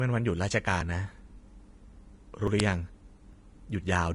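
The audio is speech, and it carries clearly audible codec damage throughout. The treble sounds hissy and grainy. Tones are roughened and attacks are blurred. The likely cause is Vorbis compression at a low bitrate, around 35 kbps. At that rate the encoder lowers its cut-off and quantises the upper band coarsely. Fine detail there turns into noise of similar energy. The sound skips ahead at 0.81 s and 2.48 s. A few tens of milliseconds vanish each time, and the two sides are butted together with no silence between them. A longer skip comes at 3.33 s, where roughly a sixth of a second is lost. These jumps sound like a dropped buffer (overrun). The program failed to collect its samples before the hardware overwrote them, so that stretch of audio is simply gone. At 2.60 s there is a crack lasting about 1.45 ms. This is an uninitialised buffer, which fits a 64-sample block. A buffer went out before any audio was written to it, and leftover memory values were played as sound.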